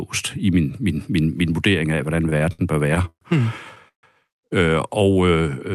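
Speech, carried over an Opus call link whose audio stops near 12 kHz. Repeated stalls (stutter) run from 2.29 to 3.24 s, just after "min vurdering af hvordan". The sound hangs six times, the longest for 122 ms. About a quarter of that stretch is held-over sound. Nothing is lost, but the speech drags. Packets kept arriving late, so the jitter buffer ran dry again and again. Then a call audio freeze hits at 3.88 s and lasts to 4.06 s. The last sound is held and fades. Then 120 ms of silence follows. The speech resumes where it stopped, 148 ms later, with nothing missing. The likely cause is packets held up in transit, leaving the jitter buffer empty.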